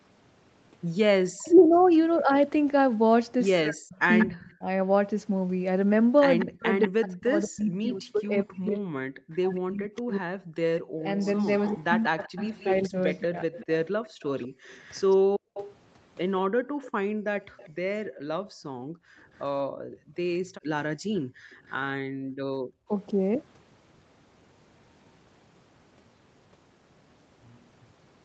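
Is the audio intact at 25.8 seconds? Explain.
Yes, the speech is intact at 25.8 seconds, with no dropout, glitch or other fault at that moment.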